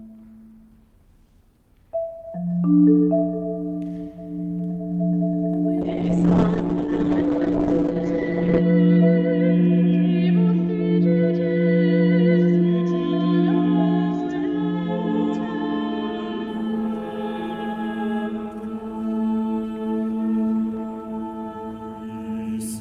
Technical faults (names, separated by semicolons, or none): call bitrate drop